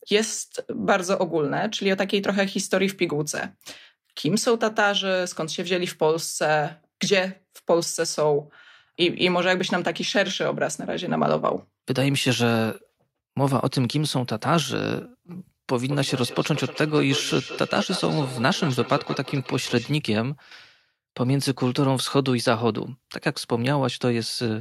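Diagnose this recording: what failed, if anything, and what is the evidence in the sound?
From 15.9 s to 19.9 s the speech returns as a ringing repeat roughly every 200 ms, peaking about 12 dB below the talker. This is feedback echo between two devices, a call-processing failure: the local echo canceller cannot remove sound another device plays.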